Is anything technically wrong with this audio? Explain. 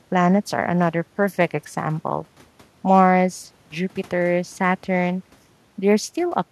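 No, nothing technically wrong can be heard here.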